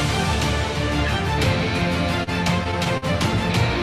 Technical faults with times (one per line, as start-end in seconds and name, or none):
2.23-3.05 repeated stalls (stutter)